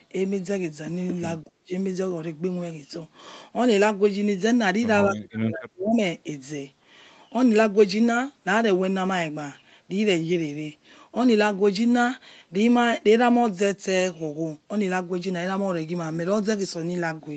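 At 1.43 to 1.71 s, and again from 5.08 to 5.99 s, the talker's level suddenly drops by about 30 dB or more. That's likely speech suppressed in double talk: the echo canceller could not separate the talker from the far side's echo on the loudspeaker and turned both down.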